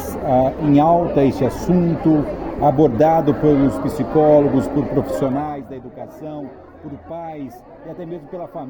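Zipper noise runs from 5.12 to 5.64 s. The level is pulled down by roughly 15 dB in unsmoothed steps of about 1 dB, around thirty per second. Each jump leaves a tiny click, so the drop carries an audible ticking, zipping texture.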